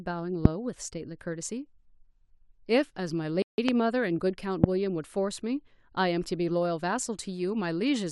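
It's a speech clip with three loud pops at about 0.45, 3.69 and 4.64 s, single sharp spikes well above the speech, likely voltage glitches from a switch or driver. There's also a playback stall from 3.42 to 3.58 s, roughly 160 ms of silence mid-flow, likely the player running short of data.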